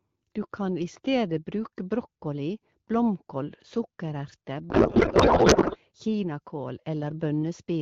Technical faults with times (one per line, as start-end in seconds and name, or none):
4.69-5.77 codec payload misread